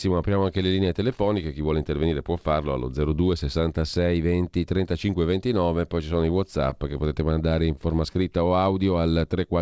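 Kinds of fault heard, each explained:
Jitter buffer slow-down: the receiver repeated pitch periods to build a reserve. From 8.49 to 9.19 s, speech drags at 92% speed, same pitch.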